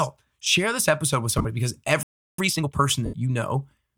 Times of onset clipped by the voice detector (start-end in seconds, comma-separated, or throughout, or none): none